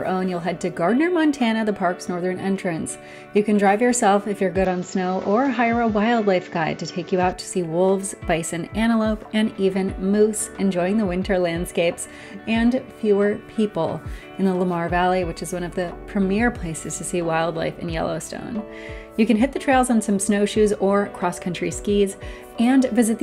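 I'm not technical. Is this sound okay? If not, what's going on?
No. From 4.65 to 7.33 s the sound turns duller, with nothing above 7.6 kHz and its own added background noise, then clears again. That points to an input switched to a poorer device, likely another microphone, with no gap and little change in loudness.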